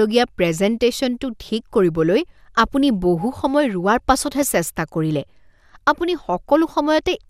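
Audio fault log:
4.26–4.56 s, DAB burbling: for about 0.3 s the speech is broken by short blips of noise in single sub-bands, which fits roughly a dozen corrupted MP2 frames from residual bit errors near a tenth of a percent. Unlike a dropout or mute, the sound keeps running.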